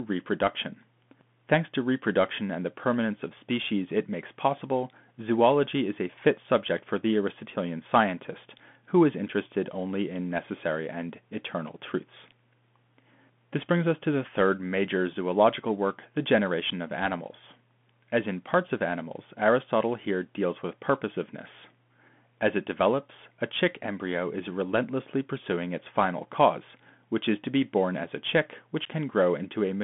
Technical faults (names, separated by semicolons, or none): Bluetooth CVSD headset codec